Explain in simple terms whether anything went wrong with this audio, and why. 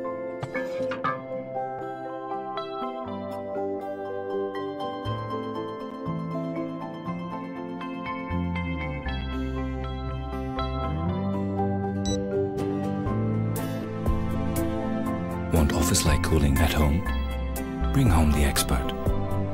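The audio has three blocks of digital silence, at 1.79 s, 5.91 s and 9.21 s, each only 3 to 9 milliseconds long. The sound snaps straight to silence and back, with no fade, so each one is a brief tick or dip rather than a softening dropout or crackle.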